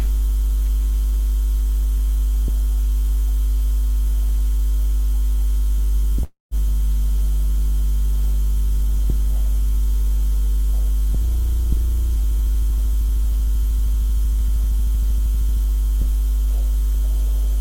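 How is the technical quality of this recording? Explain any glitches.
Two network-related glitches are audible.

At 6.23 to 6.54 s there is a call audio freeze: the sound stalls and the last fragment carries on as a fading buzz or hiss that drops to near-silence for about 160 ms. Delayed packets likely emptied the jitter buffer. Playback then resumes where it stopped, so nothing is lost but roughly 280 ms of delay is added.

From 11.2 to 15.6 s a jitter buffer speed-up runs the audio at 105% speed with unchanged pitch, giving a slightly hurried feel. The receiver trimmed many tiny pitch-period slices, about a fifth of a second in total, to drain excess buffered delay.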